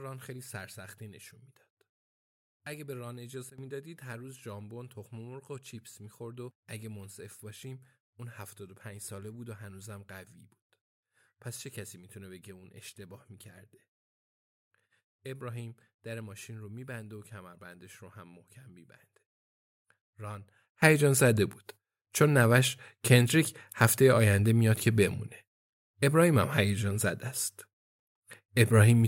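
Sudden gain jumps at 3.50 to 3.58 s and from 20.82 s to the end: the speech and its background noise drop together by about 14 dB, then later leap up by about 18 dB, likely from a gain setting applied instantly without a ramp.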